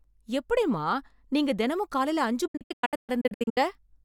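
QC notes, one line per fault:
2.47–3.58 s, digital broadcast dropout: the speech breaks into several short silent holes across about 1.09 s, losing 672 ms in total, the longest gap 128 ms. Each cut fades in 8 ms. The receiver muted on lost or corrupt frames, so that audio is gone.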